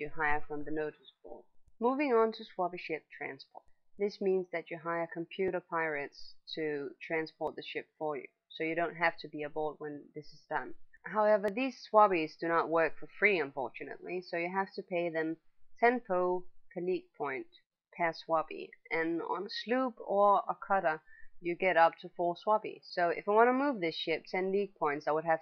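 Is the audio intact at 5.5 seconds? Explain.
No. At about 5.48 s there is an overlap between stream segments. Two segments, each about 2 s long, claim the same short stretch of time. The player trims that shared span, though the sound wasn't duplicated. Roughly 20 ms of real audio disappears. The waveform jumps, heard as a brief click or tiny skip.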